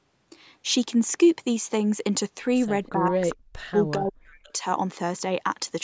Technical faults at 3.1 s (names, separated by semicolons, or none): speech suppressed in double talk